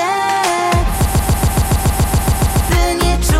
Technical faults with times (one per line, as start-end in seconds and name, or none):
1.05-2.69 broken-record loop